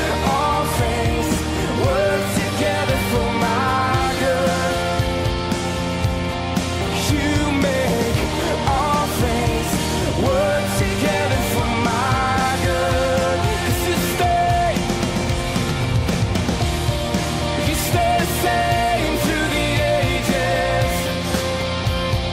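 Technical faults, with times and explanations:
Throughout: mains hum. A steady 60 Hz tone runs under the entire clip, roughly 15 dB below the wanted signal. It comes from the power line coupling into the audio path, through a ground loop or a nearby transformer, so it persists unchanged regardless of the material.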